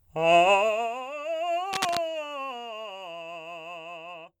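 Cable scratch noise from 1.73 to 1.98 s: a quarter-second burst of rough scratching about as loud as the music, likely from a worn cable or connector being moved.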